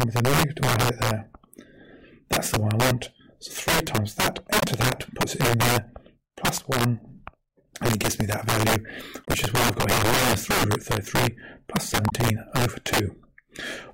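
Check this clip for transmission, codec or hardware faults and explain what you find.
Two faults are present: integer overflow across the whole clip, and damaged data in the compressed stream at three points.

Integer overflow, throughout: the signal is driven about 10 dB past full scale. Roughly one sample in twenty wraps to the opposite sign instead of being limited, giving harsh cracks on loud peaks.

Damaged data in a compressed stream, at 4.59–4.63 s, 9.23–9.27 s and 12.08–12.13 s: the decoder misreads corrupted frames and loses sync, producing brief chirps or blips about 40–50 ms long.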